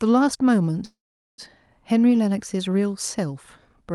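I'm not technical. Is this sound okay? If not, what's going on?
No. A call audio freeze happens from 0.85 to 1.41 s. The speech stops and trails off into a short fading buzz, then goes silent for almost half a second. Delayed network packets are the likely cause. When they arrive, the speech resumes where it stopped, with nothing lost.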